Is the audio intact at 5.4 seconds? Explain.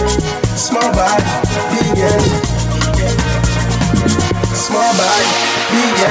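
No. At 5.4 seconds the audio shows gain pumping, which runs through the whole clip rather than just at that moment. The level is pulled down on every loud sound, swinging by around 5 dB, so loud and quiet parts sit squashed close together. The likely cause is input gain set far too high, with a fast limiter or compressor clamping down on each peak. The call-style band limit, with nothing above 8 kHz, is not part of the fault.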